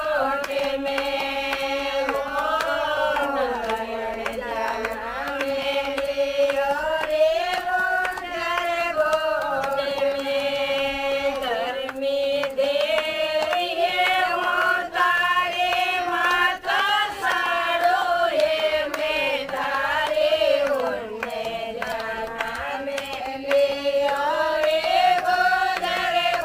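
Sample clock jitter runs through the whole clip: the converter's timing wanders by something like 5 microseconds, so each sample is captured a little early or late. Where the waveform changes fastest, that timing slip becomes an amplitude error, sitting roughly 30 dB below the signal. It sounds like a gritty hiss that swells with loud, bright passages and disappears in quiet gaps. A spectrogram shows a broadband haze strongest under high-frequency energy, while the waveform looks essentially unchanged.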